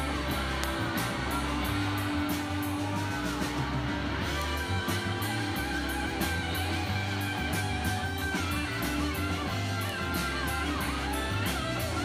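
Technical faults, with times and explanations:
0.64 s, 4.42 s and 9.89 s, bit error spike: a flipped bit makes one sample (about three at 0.64 s) jump by a power of two, peaking near -8 dBFS at first, then about -14 dBFS, before snapping back. Each is a sharp tick, a lone needle on the waveform and a thin full-height vertical line on the spectrogram.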